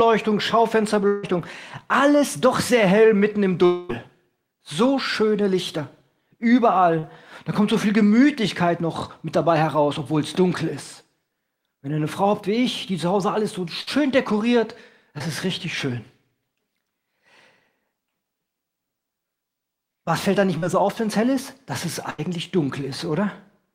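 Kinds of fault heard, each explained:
Long network dropout: At 1.07–1.25 s and 3.65–3.91 s, the sound stretches into a fading buzz or hiss for about 0.16 and 0.24 s, likely from a lengthy network gap.
Short concealed packet loss: Brief smears, 20–40 ms each, where the decoder extended the preceding sound to cover packets that arrived too late.
Burst of packet loss: At 13.81–13.89 s and 22.10–22.20 s, a held, dimming buzz or fading hiss replaces 60 and 80 ms of lost consecutive packets before the audio resumes.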